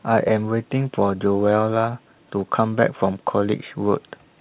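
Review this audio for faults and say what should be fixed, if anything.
Nothing here needs fixing: the speech comes over a normal G.711 mu-law call path at 64 kbps, so the lack of anything above 4 kHz is simply that codec's bandwidth and not a fault.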